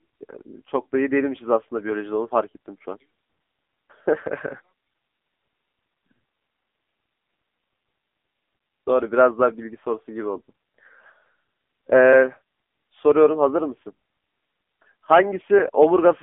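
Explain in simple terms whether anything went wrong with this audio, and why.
Something did go wrong, from start to finish. The speech passed through an AMR narrowband mobile codec, the squeeze used for old phone calls. Nothing above about 3.6 kHz survives, so it sounds thin and boxy. The heavy compression also makes the voice buzzy and robotic.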